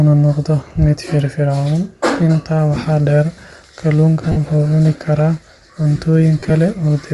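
The whole clip has a breathy, grainy edge on the speech, with a papery hiss riding on sibilants and upper harmonics. This plainly audible damage is most likely Bluetooth LC3 compression. The transform codec starves the upper spectrum, zeroing many bins and refilling them with shaped noise. The grain fits a rate around 48 kbps with 7.5 ms frames. On a spectrogram the region above the strong harmonics looks speckled and blocky in narrow time slices instead of showing clean harmonic lines.

From 4.32 to 4.37 s there are lost LE Audio frames, about 45 ms of missing audio. The decoder covered the gap by repeating the last spectrum with randomised signs, so the voice briefly turns into a noisy smear. A spectrogram shows the harmonic stripes dissolving into a flat, diffuse patch. The waveform loses its periodic shape.

From 6.39 to 6.50 s a second burst of lost LE Audio frames totals about 67.5 ms, scattered across roughly 105 ms, with the longest continuous gap around 30 ms. 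The sound stutters between real audio and smeared, hissy substitutes. On a spectrogram this shows as several short smudged columns.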